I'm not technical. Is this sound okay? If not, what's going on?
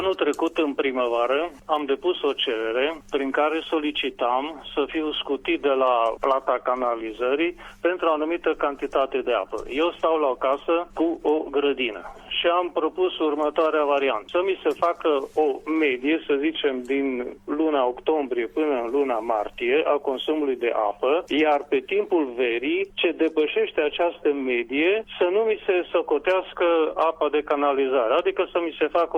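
No. There is hard clipping in five places: 1.73, 6.24 to 6.31, 25.22, 27.51 and 28.96 seconds. The sound got too loud for the recording to hold. Its peaks were sliced flat. You hear brief crackles, longest at 6.24.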